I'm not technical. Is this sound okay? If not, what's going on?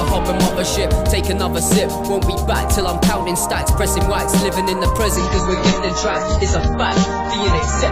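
No. From about 5.17 seconds to the end at 7.91 seconds, the sound abruptly turns rougher and watery, but it never pauses. This is an adaptive stream at a lower bitrate: the connection slowed, so playback switched to a smaller, rougher copy.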